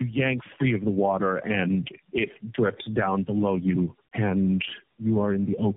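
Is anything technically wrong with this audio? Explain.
Yes. Throughout the clip the speech shows tandem speech coding. It has passed through roughly four low-rate speech coders in a row, which fits AMR-NB at about 8 to 10 kbit/s and iLBC, bridged by G.711 links. Each coder re-encodes the previous coder's errors, so the roughness, muffling and warble compound, and nothing survives above 3.7 kHz. A single narrowband codec would sound band-limited but cleaner. Here the stacked, grainy smearing gives away the repeated transcoding.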